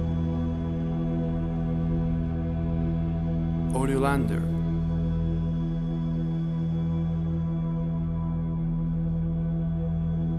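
No technical faults can be heard anywhere in the clip. The sound runs without any break, glitch or other disturbance.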